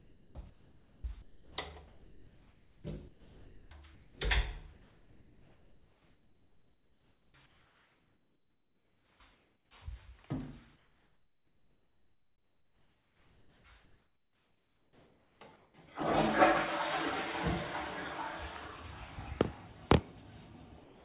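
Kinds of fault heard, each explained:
Sound chopped by the voice detector: From 0.00 to 1.58 s and again from 1.88 to 4.19 s, the sound keeps breaking up. Quieter parts and edges of events vanish under a flat synthetic hiss, about 1.25 s of the first stretch and 1.83 s of the second. This is likely because a sender's activity detector repeatedly gated transmission on and off and the receiver inserted comfort noise.
Comfort noise in place of the background: From 4.73 to 9.71 s and from 10.76 to 15.74 s, the genuine background gives way to a steady, detail-free noise lasting about 4.7 s and 4.6 s respectively. This is the signature of discontinuous transmission, where the far end stops sending during what it judges to be silence, and the receiver synthesises a roughly matched noise bed. Here that substitution is the likely cause, heard as the ambience flattening out.
Sound dropped by the voice detector: At 20.84 s, right up to the clip's end, about 0.21 s of sound disappears and is replaced by smooth synthetic noise. 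The sound never returns before the audio stops. This fits a detector likely misjudging a soft final sound as background and halting transmission, leaving comfort noise in its place. Throughout, nothing reaches above 4 kHz, consistent with the narrowband telephone codec on this call path.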